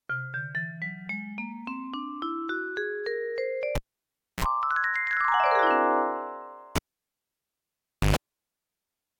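At 3.75 s and again at 6.76 s a live cable is pulled and plugged in. A pop gives way to near silence for 0.64 s and then 1.36 s, and a brief burst of mains buzz sounds as the plug tip touches, 60 Hz for 44 ms the first time and 50 Hz for 115 ms the second. A second pop brings the sound back at 4.45 s and 8.16 s. The framing pops and the mains hum set it apart from a clean digital dropout.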